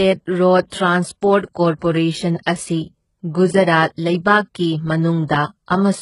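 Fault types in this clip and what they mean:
HE-AAC compression: The speech is heavily damaged throughout, likely by HE-AAC coding. The sound fits a very low rate near 12 kbps. Only the lower frequencies are truly coded. The treble is copied up from below, so s sounds turn gritty and lispy. Nothing exceeds 11.1 kHz.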